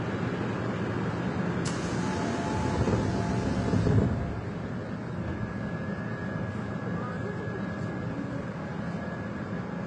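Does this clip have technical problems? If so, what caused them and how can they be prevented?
Yes. All the way through, the sound has a dull, smeared top end with nothing above about 10.6 kHz, plus two layers of compression grit at once: a swirly, watery texture alongside a grainier, warbly one. That's likely transcoding between lossy codecs, which fits a very low-rate HE-AAC encode around 16 kbit/s that was then re-encoded to Vorbis at roughly 31 kbit/s. The second encoder wasted its bits reproducing the first one's junk, kept that early band limit, and stacked its own artefacts on top. To prevent it, keep a lossless master and encode to each delivery format directly from that, never from another lossy file.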